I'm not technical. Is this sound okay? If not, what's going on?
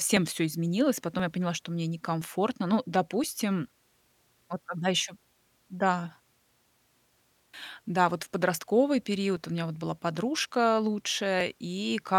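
No. These are periodic USB or driver dropouts: about once a second, every 1.02 s, something on the computer briefly stalls the audio connection, and roughly a millisecond of speech is skipped. From 0.17 s to 11.4 s, the skips are heard as regular ticks wherever there is speech.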